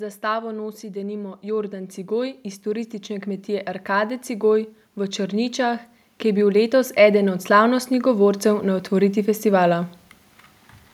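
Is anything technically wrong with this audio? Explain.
Yes. This speech clip has two episodes of automatic gain rising. The first runs from 0.2 to 4.58 s, the second from 5.15 to 9.9 s. In each, the level climbs by about 9 dB. The automatic gain control judged the input too quiet and turned its gain up slowly. Because it acts on the whole signal, the voice and the background noise swell together. Each rise is a gradual lift over several seconds, not a jump.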